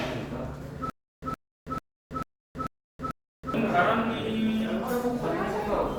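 From 0.9 to 3.54 s, a 117 ms burst repeats six times, every 442 ms, separated by 325 ms of dead silence: a stutter with silent gaps, likely a stalled stream replaying its last fragment.

From 3.86 s to the end, the sound turns rough and muffled as a call bitrate drop takes the encoder from 96 to 25 kbps, coding coarsely and losing highs.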